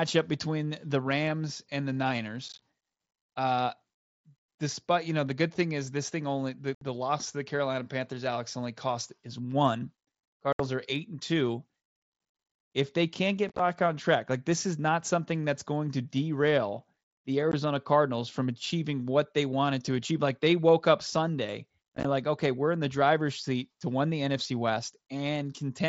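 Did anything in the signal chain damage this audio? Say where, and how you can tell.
Yes. Unconcealed Bluetooth headset packet loss, headset-to-phone link: abrupt silent gaps at 2.49, 6.75, 10.53, 13.49, 17.52 and 21.96 s, lost packets never filled.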